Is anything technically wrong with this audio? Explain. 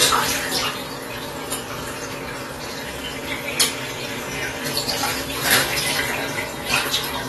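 Yes. AAC compression runs throughout. A low-bitrate AAC-LC encode, likely around 32 kbps, removes everything above 12.1 kHz, leaving the sound dull, smeared and audibly warbly.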